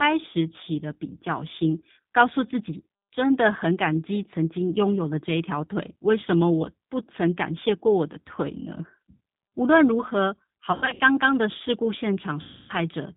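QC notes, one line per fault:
Throughout, G.729 codec: speech rebuilt from filter and pulse model at 8 kbit/s sounds rough and synthetic; spectrogram shows nothing above 4 kHz, with smeared harmonics.
10.72 to 11.01 s, VoIP packet loss concealed by the speech codec: about 180 ms lost in short gaps up to 60 ms; waveform shows decaying stretches between recovering speech.
12.41 to 12.73 s, VoIP packet loss concealed by the speech codec: 280 ms lost, extrapolated from the last speech into a fading sound; spectrogram shows the stretched sound tapering off.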